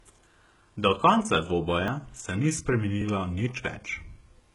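Speech, with codec damage throughout. The treble sounds synthetic rather than natural. Sibilants come out gritty and metallic. This is likely HE-AAC compression at a very low bitrate, something like 12 kbps. The codec keeps only the lower spectrum and rebuilds the top by copying lower bands upward. The copied harmonics do not line up across the crossover, and at this bitrate the damage is heavy. Two short skips occur, at 1.88 s and 3.02 s. Each is a small jump forward in the sound with no gap of silence. A few milliseconds of audio are simply missing there. This is likely a dropped buffer (overrun). The program fell behind, the hardware overwrote samples it had not collected, and the audio on either side was joined directly.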